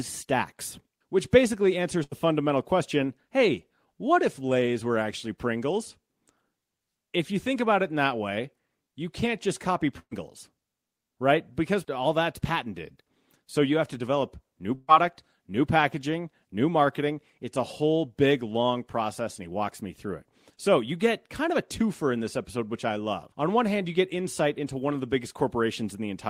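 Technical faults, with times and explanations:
2.03–2.13 s, burst of packet loss: about 80 ms of audio never arrived, so the receiver stretched the last sound into a fading fill before jumping ahead past the missing stretch.
9.99–10.13 s, burst of packet loss: roughly 120 ms lost. The concealment fill dies away into about 60 ms of silence, then the speech resumes further on.
14.75–14.90 s, burst of packet loss: the longest gap, about 140 ms missing. A held, decaying fill covers nearly all of it before the speech picks up again.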